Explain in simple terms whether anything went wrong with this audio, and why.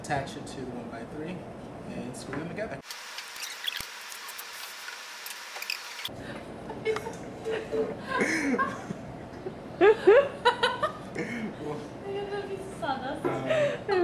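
Nothing went wrong with this audio that a listener would notice. There are no dropouts, sudden jumps or other glitches anywhere in the recording.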